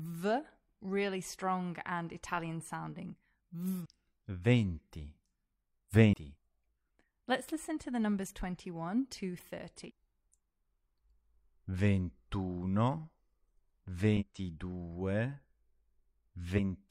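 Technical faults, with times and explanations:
3.81–3.86 s, 6.09–6.14 s, 9.85–9.91 s and 14.17–14.23 s: damaged data in a compressed stream. Each event is a brief glitch of about 50 to 65 ms. At these points the compressed data is corrupted. The decoder misreads those frames and loses its place in the stream. It then has to find the next valid frame header. The short chirp or blip is what that garbled decoding sounds like.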